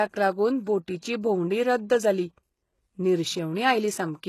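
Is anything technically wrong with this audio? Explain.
Yes. Throughout the speech there is heavy damage consistent with HE-AAC compression, likely at a very low bitrate, around 16 kbps. Only the lower band is coded; the treble is synthesised from copied lower bands, so harmonics misalign, sibilants turn gritty and metallic, and nothing remains above 12.3 kHz.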